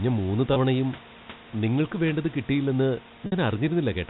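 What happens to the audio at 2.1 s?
At 2.1 s the speech carries on intact, with nothing there beyond the room noise about 19 dB below it and the narrow, telephone-band sound of G.711 A-law coding.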